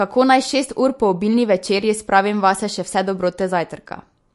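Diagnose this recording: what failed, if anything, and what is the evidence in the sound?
The failure sits at the codec stage, most likely MP3 compression. The speech has nothing above 11.2 kHz for its whole length, a hard ceiling rather than a natural roll-off. Damage is plainly audible throughout. Weak frequency lines drop in and out from frame to frame, so the sound turns watery and swirly. Sibilants pick up metallic chirps. Consonant attacks smear. The encoder ran short of bits, which fits a low rate around 48 kbps.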